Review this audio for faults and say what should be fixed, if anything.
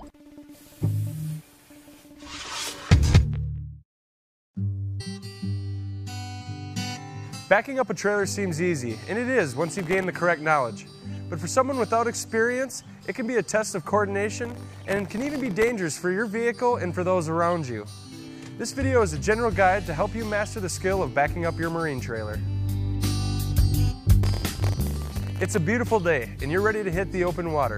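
At 4.99 s the sound jumps forward abruptly, with a small blip at the join. Part of the programme is missing. This is a stream segment skipped. The likely cause is that one segment of the stream failed to arrive, and the player moved on to the next instead of waiting. It should be fixed. Prevent it by retrying failed segment requests and keeping a larger playback buffer.

Processor overload crackle appears three times: 9.79 to 10.04 s, 14.39 to 15.69 s, and 24.23 to 25.58 s. Each burst is a gritty tearing riding on the sound. The buffers here are very short, under a millisecond, which fits a tiny processing block. The processor missed dozens of these deadlines in the first burst and around a hundred in each later one. Every miss drops in a tiny hard-edged gap of silence. It should be fixed. Prevent it with larger buffers or less processing load during playback.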